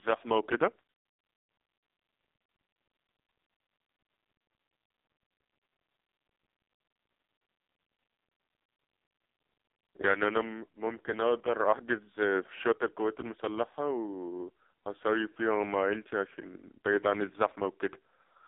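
AMR narrowband mobile codec damage runs throughout: nothing passes above 3.8 kHz, and the heavy buzzy, synthetic coding fits its lowest 4.75 kbps mode.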